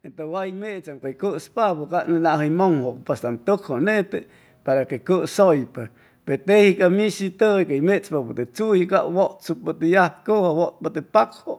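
It's a speech clip where the microphone volume gets stepped up twice: at 1.02 s the whole thing jumps by about 8 dB, then at 2.04 s by about 5 dB more. The voice and the background rise together, so the input gain changed, not the speaker's level.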